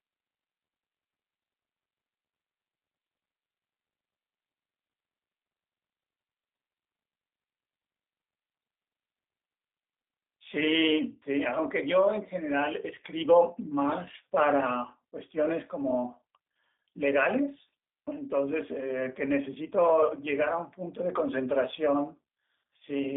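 Speech here, run through what sounds like the G.729 codec for the whole clip, which fits an 8 kbit/s VoIP call. Nothing gets past about 3.8 kHz, the low end thins out under roughly 250 Hz, and the voice comes out plainly rough and synthetic from the low-rate model-based rebuild.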